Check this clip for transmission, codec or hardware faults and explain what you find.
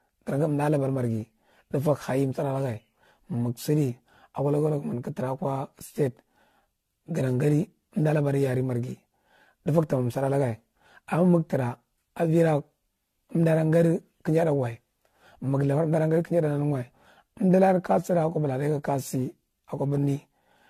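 One codec fault runs through the whole recording. From start to finish the speech sounds swirly, smeared and hollow, with blurred consonant attacks and nothing above 14 kHz. This is likely generation loss: repeated AAC-LC decoding and re-encoding, around seven passes at what sounds like 64 kbit/s. Each pass requantised on a shifted frame grid, so the noise and spectral holes accumulated.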